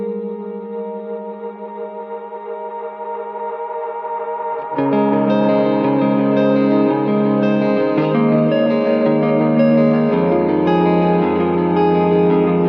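Nothing is technically wrong with this audio.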